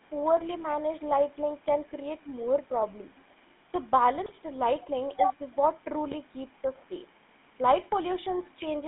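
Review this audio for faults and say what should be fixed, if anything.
The GSM full-rate codec runs throughout. Sound is confined to 200 Hz to 3.6 kHz, with buzzy, gravelly roughness from pulse-driven vocal-tract coding, consistent with 13 kbps GSM.

GSM bit errors strike at 4.26 to 4.33 s and 6.11 to 6.15 s. Corrupted filter, pitch or gain values cause brief squawks and gargling.

Record over a wideband path, or at least a strong, error-free link, to avoid both faults.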